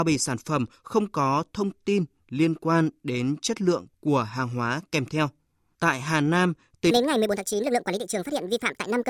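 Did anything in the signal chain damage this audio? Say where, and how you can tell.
Yes. From 6.91 s to the end, a playback wrong sample rate makes speech 1.5 times faster and 7 semitones higher together, fitting 32 kHz audio clocked at 48 kHz, unlike a pitch shift, which keeps tempo.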